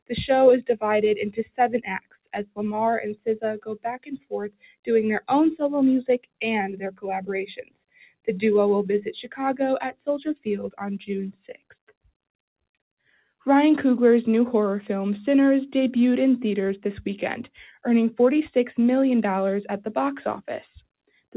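A speech-tuned noise suppressor applied to music or sounds is pumping this audio, swinging its level by roughly 10 dB as it mistakes sustained content and tails for noise. On a spectrogram, onsets stay bright while held energy fades into darker gaps, and the waveform envelope breathes unevenly. The sound is cut by the noise suppressor most heavily at 1.75–2.59 s (about 21 dB down), 3.59–4.33 s (about 21 dB), 4.50–4.89 s (about 20 dB), 7.59–8.28 s (about 20 dB), 9.23–9.39 s (about 15 dB) and 11.48–11.72 s (about 18 dB). These show as sudden notches in the waveform and darkened spectrogram columns a few hundred milliseconds long, where decays are chopped short. The spectrogram is also empty above 4 kHz, as expected for the G.711 mu-law call path.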